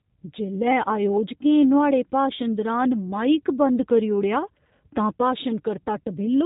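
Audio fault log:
Throughout, G.729 codec: the speech sounds narrow, slightly rough and synthetic, with nothing above 3.8 kHz. It is rebuilt from a vocal tract filter, a pitch predictor and sparse pulses in 10 ms frames, which fits a low-rate VoIP link near 8 kbit/s.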